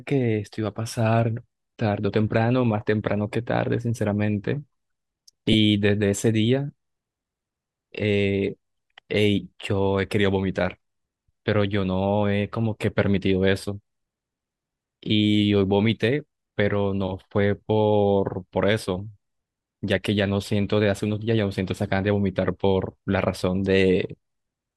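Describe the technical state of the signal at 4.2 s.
At 4.2 s the speech signal is intact, with nothing beyond the light touch of the lossy compression it passes through.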